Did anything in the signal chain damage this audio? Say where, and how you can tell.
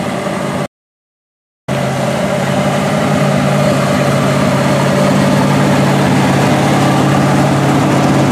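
Yes. There is an audio dropout to silence from 0.66 s to 1.68 s. The sound stops abruptly and resumes just as abruptly, about 1.0 s later. The gap is silent, with no room tone or noise floor underneath. That absence marks it as a break in the input, not a quiet moment. The likely cause is a lost connection at the input stage, while the recorder kept writing silence. Whatever sounded during that second is gone.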